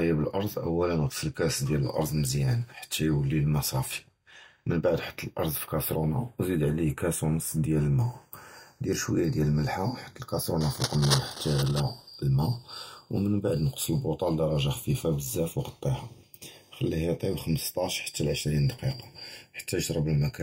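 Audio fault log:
throughout: channels drifting apart. The two channels run on clocks that disagree by roughly 20 parts per million, so the offset between them creeps up to just under half a millisecond by the end. Summed to mono, comb-filter notches sweep slowly through the speech, giving a gradual flanging colour.
10.61 to 11.80 s: cable scratch noise. Dense, irregular bursts of crackle and rustle sit over the speech, only a few decibels below it. This is likely a worn cable, connector or control being moved, so its contact resistance fluctuates rapidly.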